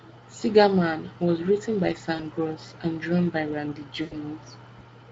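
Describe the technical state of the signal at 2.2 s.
VoIP packet loss concealed by the speech codec sits at 2.15 to 2.21 s. About 40 ms of audio went missing, which fits two 20 ms Speex frames, and the decoder filled the gap by repeating its last pitch and spectral envelope at falling gain. The result is a short, smeared stretch of buzzy tone or coloured noise that fades, and because each frame builds on the previous one, the voice stays weak or distorted for tens of milliseconds after packets return, against the light Speex colouring around it.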